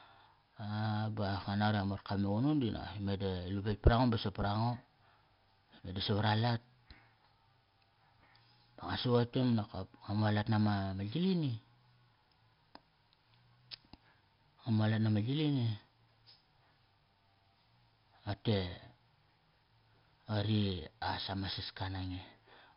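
From start to finish the speech carries heavy 4-bit ADPCM compression. Each sample is coded as a coarse step from a prediction, so a gritty hiss rides on every loud syllable and smears sharp onsets, and nothing above 5.3 kHz fits roughly 44 kbps. Unlike perceptual-codec artefacts, it is hiss that follows the signal level, not swirling or warbling.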